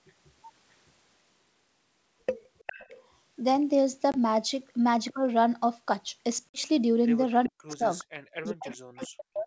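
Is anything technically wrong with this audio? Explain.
Yes. A leaking echo appears at 2.66 to 2.98 s, 7.44 to 8.04 s and 8.45 to 9.07 s. It is a faint delayed copy of the speech, 407 ms late and well below the direct sound. This is likely echo leak: a far-end loudspeaker reached the microphone, and the echo canceller missed part of it.

Packet loss on an ADPCM call hits at 4.12 to 4.17 s and 6.49 to 6.59 s, losing 20 ms and 50 ms. Each gap is a hard-edged hole. The decoder's predictor then has to catch up, so the speech returns slightly distorted.

From 7.48 to 7.88 s, and from 8.5 s to the end, the speech ducks very deeply while echo overlaps it. That points to speech suppressed in double talk. The canceller likely could not separate talker from echo, so it turned both down.

At 8.16 to 8.22 s the room sound drops by about 40 dB, then returns. This is background gated by the echo canceller, clamping the microphone while the loudspeaker played.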